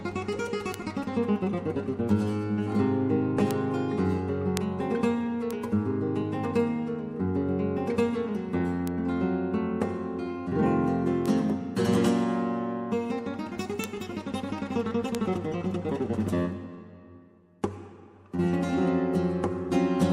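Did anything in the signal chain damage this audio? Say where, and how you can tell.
Yes, there are bit error spikes from the digital path, in memory or on a link. There are sharp ticks at 0.74, 3.51, 4.57, 5.51, 8.88, 11.26, 13.84 and 15.15 s, up to about -4 dBFS. Each flipped bit knocks one to three samples off by a power of two, so the tick is broadband and unrelated to the sound.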